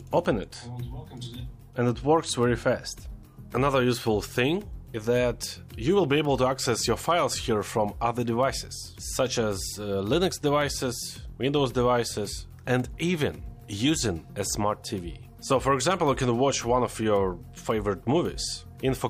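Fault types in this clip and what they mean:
No technical faults can be heard anywhere in this audio. Nothing in the sound points to a problem with how it was captured, carried or played back.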